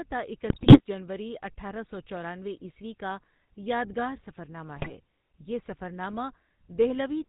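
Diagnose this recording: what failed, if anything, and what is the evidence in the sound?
The speech has a buzzy, gravelly roughness throughout, with nothing above 4 kHz. This is the GSM full-rate codec at the codec stage, and the damage is plainly audible. Its pulse-driven vocal-tract model, consistent with 13 kbps, rebuilds the excitation coarsely.

Two bursts of squawking and gargling break the speech, from 0.5 to 0.81 s just before "جنوری اٹھارہ سو چورانوے", and from 4.74 to 4.91 s between "عیسوی کا یادگار سفرنامہ" and "یہ سفرنامہ". These are GSM bit errors on the network link. Corrupted filter, pitch and gain values distort each hit frame.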